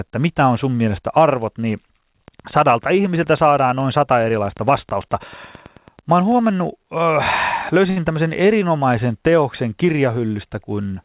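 Something, most likely interference from nearby equipment or a faulty connection or power supply, injects a steady stream of pulses into the signal from 2.28 s, just after "sun mielestä arvot niin", until 6.33 s. The result is a train of clicks: about 40 near-identical ticks at a regular pace of about 9.2 per second, peaking at roughly the level of the speech itself. They tick through the pauses as well as over the talking.

At 7.90 s a packet arrives late and the jitter buffer runs dry. The receiver holds the last sound for 63 ms until the packet turns up, then resumes from the same point. This short stall from a late packet loses nothing, but one sound is stretched slightly too long with a slight buzz or dip, and everything after it lands 63 ms later. Across the whole clip the narrowband call path leaves nothing above 4 kHz, which fits G.711 A-law at 64 kbps.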